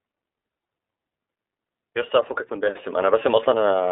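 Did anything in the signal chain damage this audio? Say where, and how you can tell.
Yes. Throughout the speech it sounds thin and slightly rough and synthetic, with nothing above about 3.7 kHz or below 300 Hz. That points to the iLBC codec stage, coding each 30 ms frame independently, which fits its 13.33 kbps mode.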